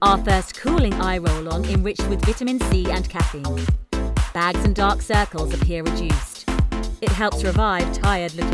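No technical faults can be heard anywhere in the clip. Nothing in the audio breaks up, drops out or changes character from beginning to end.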